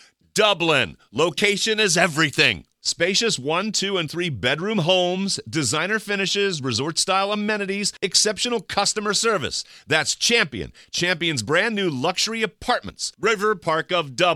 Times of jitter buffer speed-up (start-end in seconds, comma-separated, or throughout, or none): none